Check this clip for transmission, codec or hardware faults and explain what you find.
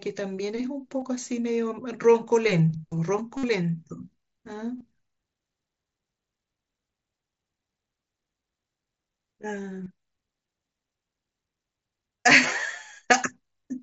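Yes, there is one fault: concealed Bluetooth headset packet loss, heard at 1.00 s, 3.37–3.43 s, 4.78–4.81 s, 9.84–9.86 s and 12.17–12.23 s. Headset-to-phone voice packets dropped out, and the receiver filled each gap by repeating the closest-matching recent waveform. This leaves a brief held buzz, clearest in the 60 ms run at 3.37 s, with a slight warble as real speech resumes. At 12.17 s the losses are scattered across 60 ms, the longest lasting about 22 ms. Throughout, the mSBC link carries speech up to 8 kHz with light grain on loud passages.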